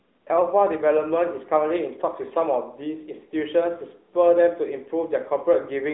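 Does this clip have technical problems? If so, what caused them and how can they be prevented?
Yes. Throughout the clip the speech carries AMR narrowband mobile codec damage: nothing passes above about 3.8 kHz, the line band sits between roughly 300 Hz and 3.7 kHz, and the voice has a plainly buzzy, synthetic edge from the vocal-tract model rebuilding it from a few pulses per subframe, which fits a mid-rate mode near 10.2 kbps. A simple telephone band filter would sound muffled but clean; here the buzz reveals the codec. Prevent it by recording directly or using a wideband codec rather than a narrowband mobile path.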